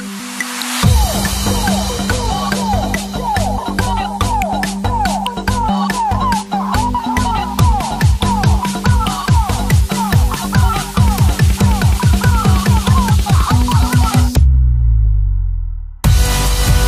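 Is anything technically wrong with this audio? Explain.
No, there is nothing technically wrong with this audio.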